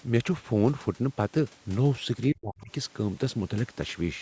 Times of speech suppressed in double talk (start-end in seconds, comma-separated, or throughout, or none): 2.30-2.71